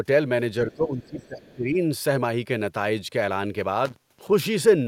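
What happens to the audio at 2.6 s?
Nothing goes wrong at 2.6 s: the speech carries on intact through that moment, with no dropout, click, distortion or other fault to be heard there.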